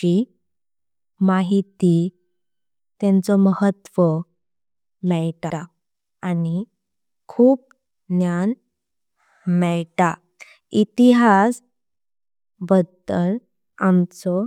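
At 5.50 s the speech stutters as an 85.3 ms stretch plays twice. This is repeated frames: a compressed block was decoded again, lengthening the audio by 85.3 ms.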